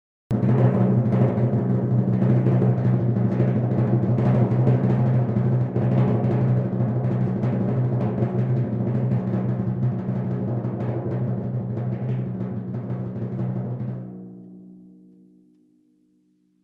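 The music opens with a cut-off start: from 0 to 0.31 s there is only digital silence, and at 0.31 s the sound begins mid-note with no attack or fade-in. Capture evidently began late, so the first onset is truncated abruptly, heard through a call-codec path whose top end stops near 12 kHz.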